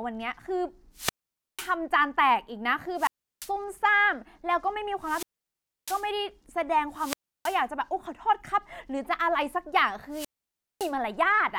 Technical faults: wireless microphone squelch dropout

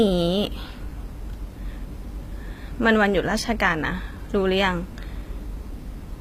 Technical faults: HE-AAC compression

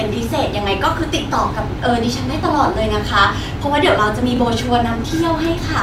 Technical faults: repeated buffer

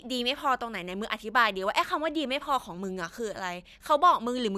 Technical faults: none

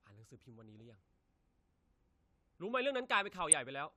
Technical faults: DAB burbling

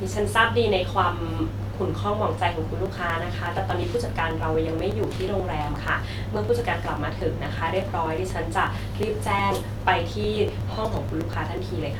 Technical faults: periodic USB or driver dropouts

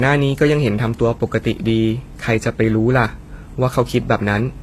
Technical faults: transcoding between lossy codecs

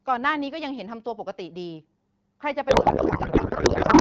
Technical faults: codec payload misread

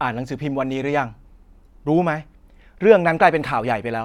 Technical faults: none

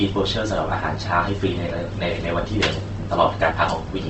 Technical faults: Opus compression

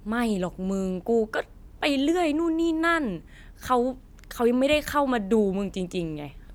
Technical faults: none

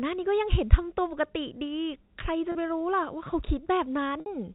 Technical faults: packet loss with pitch repetition

